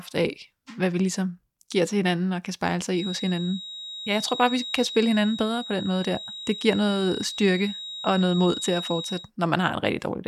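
From 2.89 s to 9.31 s a feedback whistle sits under the speech: a thin, steady tone at 3.8 kHz, around 10 dB below the voice, swelling and fading slowly in level. The likely cause is a loudspeaker-to-microphone loop held just short of runaway feedback.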